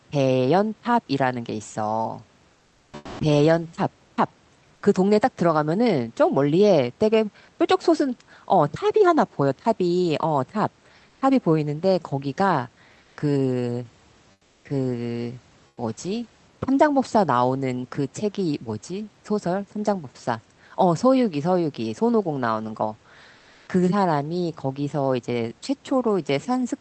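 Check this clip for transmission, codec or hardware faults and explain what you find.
One fault recurs in this speech clip: comfort noise in place of the background, at 2.53–3.19, 11.09–11.21, 13.03–13.17, 14.31–14.65, 15.67–15.77 and 23.37–23.67 s. The likely cause is Opus discontinuous transmission: during pauses the sender goes silent and the receiver synthesises noise, so the room's real background, about 39 dB below the loudest speech, becomes flat, featureless hiss. Its level jumps about 15 dB at 2.53 s, and elsewhere shifts by a few decibels.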